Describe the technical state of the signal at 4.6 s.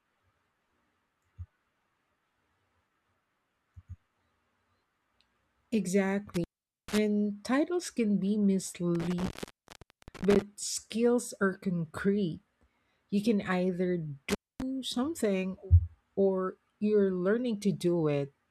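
At 4.6 s the speech signal is intact, with no audible fault at that point.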